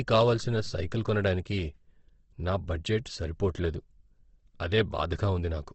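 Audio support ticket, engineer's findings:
Opus compression, throughout. Speech sounds rough and grainy, nothing above 8.2 kHz. Likely Opus encoder in CELT mode at a low rate, fitting roughly 16 kbps: band energies kept, bit-starved bands filled by folding or noise.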